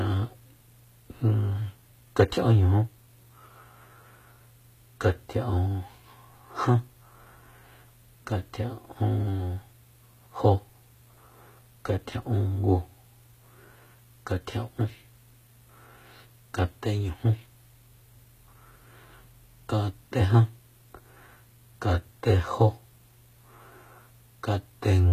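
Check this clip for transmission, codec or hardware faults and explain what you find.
One codec fault runs through the whole clip, and it is likely HE-AAC compression. The upper spectrum is rebuilt by copying lower bands upward, so s sounds turn gritty and lispy, with nothing above 14.9 kHz, which fits a bitrate near 20 kbps. Unlike plain low-bitrate coding, which dulls or removes the treble, this treble is present but misaligned and metallic.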